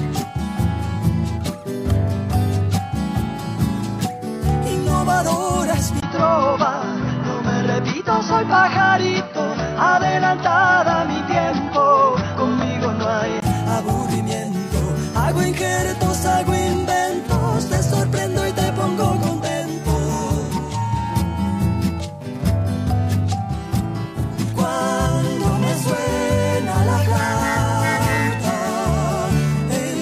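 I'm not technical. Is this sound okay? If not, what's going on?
No. From 6.00 s to 13.42 s the sound turns dull and boxy, with nothing above about 6 kHz, then clears again. This is most likely an input switched to a poorer device, another microphone or a headset. What sets it apart from simple muffling is the tiny gap of silence at 6.00 s as the switch happens, plus a faint new background noise that arrives and leaves with it, while the loudness stays the same.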